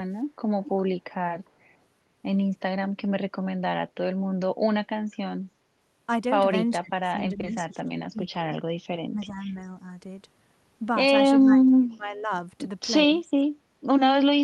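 An echo canceller on the far end, most likely with a loudspeaker in the loop, let part of the returned signal through. From 0.63 to 0.82 s this echo leak is heard as a faint copy of the speech trailing the original by about 400 ms and sitting roughly 20 dB below it. It is brief and scrappy, like a ghost of the sound a moment late.

Later, speech suppressed in double talk appears four times, likely because the echo canceller mistook overlapping talk for its own echo and turned everything down. Between 6.79 and 8.49 s the speech dips for about a second in total, by as much as 25 dB. From 9.1 to 9.55 s a milder dip of around 10 dB lasts roughly 0.4 s. The deepest cut runs from 11.4 to 12.31 s, pushing speech down about 35 dB for nearly a second. A final short dip of about 15 dB comes at 13.24 to 13.35 s. Each sounds like the voice fading or chopping out in pieces.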